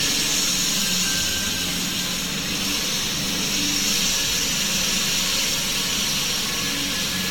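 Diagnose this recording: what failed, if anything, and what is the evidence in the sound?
Generation loss at the codec stage runs through the whole clip. The sound is swirly, smeared and hollow, transients are blurred, and nothing is present above 17.2 kHz. A single pass at this bandwidth would sound cleaner. The hollowness points to the audio having likely been decoded and re-encoded around seven times with a Vorbis-type codec at roughly 70 kbit/s, each pass quantising on a shifted frame grid so holes and noise accumulate. A single low-bitrate encode would leave sharper attacks.

A feedback whistle sits in the analogue acoustic path from 2.72 s to 5.18 s: a thin, steady 6 kHz tone about 15 dB below the main sound, swelling and fading slowly in level. The likely cause is a loudspeaker-to-microphone loop held just at the edge of oscillation, so one frequency rings on without building up. 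Unlike a tonal interference line, it is confined to this stretch and fluctuates with the loop gain rather than staying perfectly fixed.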